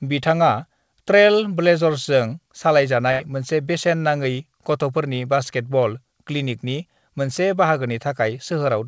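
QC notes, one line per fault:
3.12–3.21 s, burst of packet loss: the receiver stretches and fades the last sound for 74 ms to cover the gap, then jumps ahead, so 80 ms of speech is gone.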